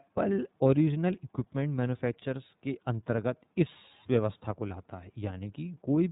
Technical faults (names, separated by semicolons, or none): iLBC codec